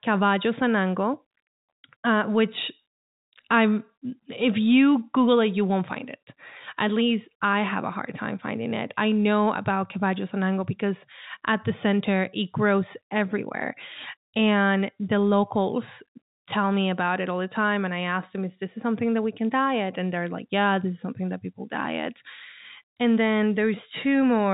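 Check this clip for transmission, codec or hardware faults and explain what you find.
Nothing stood out on listening to this speech beyond the narrow telephone band of G.711 coding, with nothing audible above about 3.8 kHz.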